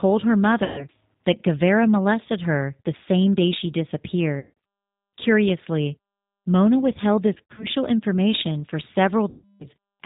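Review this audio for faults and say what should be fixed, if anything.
The whole recording has a narrow, slightly rough and synthetic quality, with nothing above 4 kHz. This is G.729 codec damage, and it is plainly audible. The codec, in its G.729A form at 8 kbit/s, does not send the waveform. It sends a vocal-tract filter, a pitch predictor and a few pulses per frame, and the decoder rebuilds an approximation of speech from them. To prevent it, carry the call on a wideband codec such as G.722 or Opus instead of G.729.

Four times the speech smears into a buzzy tone or coloured noise that fades, and it stays thin for a moment after it recovers. The gaps fall at 0.64–0.87 s, 4.39–4.51 s, 7.34–7.67 s (just before "information for") and 9.30–9.68 s (just after "information for"). This is VoIP packet loss concealed by the speech codec. When packets went missing, the decoder kept extrapolating from its last pitch and filter and lowered the gain frame by frame. 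The lost audio runs from about 140 ms to 300 ms per event. At 7.34 s the losses are scattered over about 240 ms, with the longest run about 80 ms, which fits several short 20 ms packets dropping in and out. To prevent it, reduce loss on the network path with QoS or a less congested link, and add forward error correction or redundancy.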